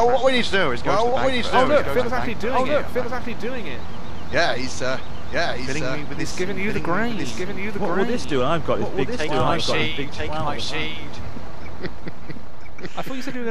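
Throughout, a doubled audio track: one copy trails about a second, about 5 dB quieter, with no echo decay, likely a duplicate capture or edit.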